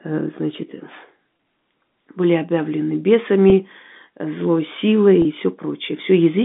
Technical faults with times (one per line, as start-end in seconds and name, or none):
1.37 packet loss with pitch repetition
3.50-3.52 packet loss with pitch repetition
5.22-5.25 packet loss with pitch repetition